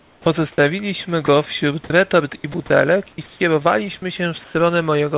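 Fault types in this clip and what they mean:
Comfort noise in place of the background: likely discontinuous transmission in pauses, so synthetic noise replaces the room background, about 8 dB quieter at the start, nearly level near 4.5 s.
Onset clipped by the voice detector: the detector was likely slow to react, leaving 50 ms unsent, so speech at 0.26 s starts abruptly without its soft beginning.
Sound dropped by the voice detector: the detector likely took part of the speech for background, so brief bits near 1.26 s and 1.84 s give way to steady noise.
Sound chopped by the voice detector: the detector likely toggled repeatedly, so 2.36–2.7 s and 3.12–3.4 s sound choppy.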